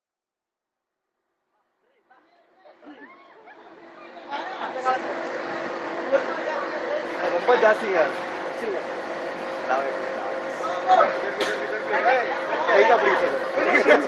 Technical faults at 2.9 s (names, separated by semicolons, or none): none